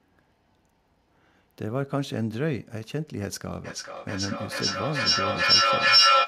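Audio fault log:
3.64–6.27 s, feedback echo between two devices: a second device in the same room is playing this call out loud, and this microphone picks that playback up and sends it back round. The echo canceller here only removes sound from its own speaker, so the loop goes unchecked. The speech returns roughly every 0.4 s, each pass thinner and more ringing, and the repeats pile up rather than fade, reaching about 10 dB above the speech at their loudest.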